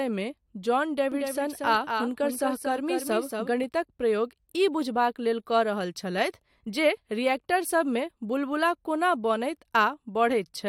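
A doubled audio track runs from 1.12 to 3.64 s. The speech is heard twice: a second, full-band copy trails the original by about 200 ms at roughly 5 dB lower level, with no reverberant tail or room colouring to soften it. Both copies come through clean, so the result sounds like a stuttering echo rather than space. It cuts in and out abruptly at those two times, which points most likely to a second, slower capture path being mixed in alongside the main one.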